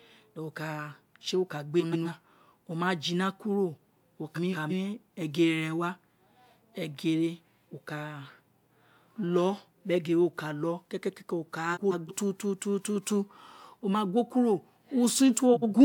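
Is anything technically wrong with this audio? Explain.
Yes. The speech has frames out of order at 1.80–2.08 s, 4.35–4.72 s, 11.74–12.12 s and 15.54–15.74 s. In each, two adjacent blocks of frames were decoded in swapped order. The blocks are 128, 171, 171 and 85 ms long, which fits runs of three, four, four and two frames. The stretch plays with its halves exchanged, giving a brief garbled flutter. No time is lost.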